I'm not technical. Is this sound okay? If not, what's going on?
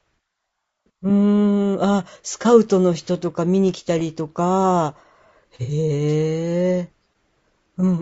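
No. Low-delay AAC compression runs through the whole clip: the speech sounds rough and grainy, with a hiss between the tones and a thin, artificial top end. This is likely the short-frame codec used in video calls, which can't capture voice detail finely.

AAC frame loss with concealment occurs at 2.42 to 2.47 s and again at 5.63 to 5.71 s. Small pieces of audio, about 30 ms and then 60 ms, went missing, and the decoder patched each gap with a guess, heard as a brief smeared, noisy blur.

A wireless microphone noise hit comes at 6.08 to 6.13 s, a quick swish of static. The radio link from the microphone briefly weakened as reflected signals cancelled each other, so the receiver's own noise rose.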